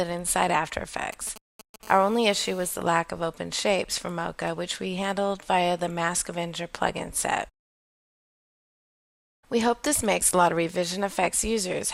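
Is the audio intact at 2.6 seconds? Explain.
No. A nearby 2G phone on a call is bursting about 217 times a second, and the audio circuit rectifies those radio pulses. The result is GSM phone buzz from 1.85 to 2.71 s, a steady, raspy, harmonic-rich 217 Hz buzz about 24 dB below the sound.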